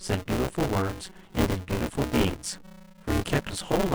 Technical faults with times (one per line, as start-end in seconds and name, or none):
0.00-3.94 buffer tearing